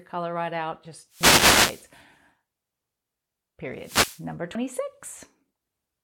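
From 1.09 to 1.90 s a wireless microphone noise hit washes over the speech: the radio link fades, receiver hiss swells into a swish of static, then clears. Unlike a dropout, the sound continues beneath the noise with no gap. At 1.21 s, inside that burst, and again at 3.44 s, an abrupt jump comes as roughly a tenth of a second vanishes, likely a dropped buffer (overrun), where unread samples were overwritten and the edges spliced with no silence. A second noise hit runs from 3.76 to 4.26 s, and another skip lands at 4.55 s.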